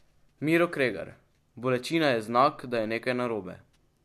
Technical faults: none

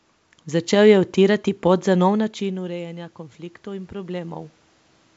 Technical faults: automatic gain rising

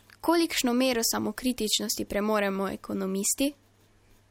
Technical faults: none

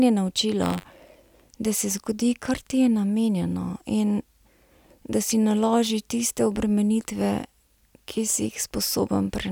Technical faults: buffer tearing

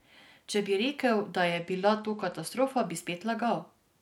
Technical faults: Bluetooth SBC bit pool drop

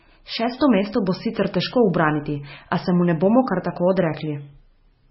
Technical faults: MP3 compression

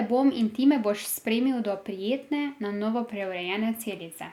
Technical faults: none

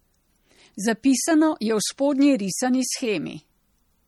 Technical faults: MP3 compression

